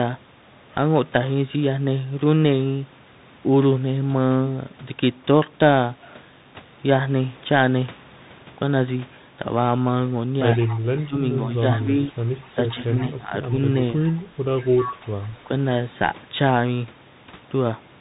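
Speech coded throughout by a Bluetooth CVSD headset codec, which fits a 64 kbps link: nothing passes above 3.8 kHz, s sounds are scratchy, loud bright sounds overload, and granular hiss sits underneath. An echo leak appears from 10.56 to 11.06 s, 12.46 to 13.03 s and 14.78 to 15.27 s as a copy trailing the speech by 108 ms, at about 20, 25 and 10 dB below it. This is likely a far-end loudspeaker pickup the echo canceller failed to remove. Speech suppressed in double talk also occurs: the level dips by roughly 15 dB for about half a second within 11.06 to 12.13 s and within 12.55 to 13.52 s, and by roughly 20 dB briefly within 14.6 to 15.05 s. The likely cause is the canceller attenuating the talker while the other side spoke.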